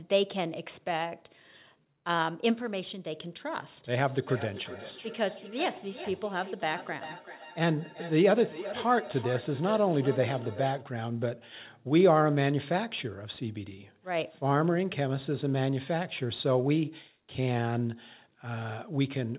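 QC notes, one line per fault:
3.98–10.87 s, feedback echo between two devices: the speech returns at a fixed interval of roughly 400 ms, each repeat thinner and more ringing, the loudest about 13 dB below the direct speech. A second device in the room is playing the call back, and its sound reaches the first microphone again. That device's echo canceller only removes its own playback, so the loop survives. The repeats are confined below 4 kHz, like the rest of the narrowband call audio.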